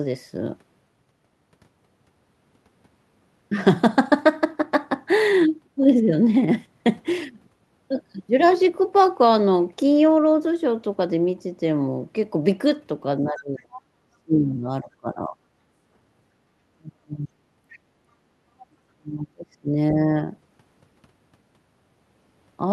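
From 13.26 to 13.67 s the speech is suppressed in double talk. The level sinks by roughly 25 dB. Both ends were likely talking at once, and the echo canceller could not tell its own talker from the loudspeaker echo. So it turned everything down. The voice dips and thins out. The same happens from 14.11 to 15.38 s. It happens again from 16.78 to 17.29 s and from 18.68 to 20.14 s, with dips of around 35 dB.

The other side's voice leaks through in short scraps. They come at 13.36 to 13.42 s and at 13.6 to 13.81 s, about 20 dB below the talker. Two fainter scraps follow, around 30 dB down. One is at 17.69 to 17.79 s, the other at 18.59 to 18.66 s. The far voice was likely played on a loudspeaker and picked up by the microphone. The echo canceller missed part of it. The leaks cluster around the suppressed stretches.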